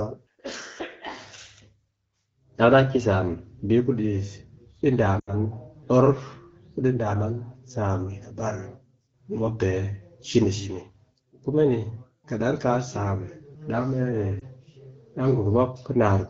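Speech, over a wideband (HD Voice) phone path, briefly drops to near silence at 5.19–5.35 s, with a shorter warble at 14.39–14.44 s. These are lost AMR speech frames, where the decoder fills each gap with the last good settings at falling gain.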